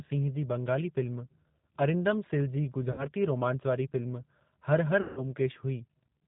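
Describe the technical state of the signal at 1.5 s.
G.729 codec damage at 1.5 s, as throughout: speech rebuilt from a vocal tract model and sparse pulses, band-limited below 4 kHz, sounds rough and synthetic, fitting roughly 8 kbit/s.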